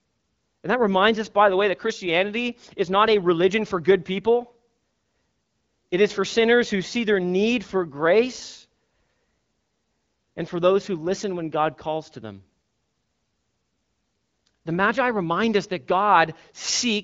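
No technical faults can be heard anywhere in this audio.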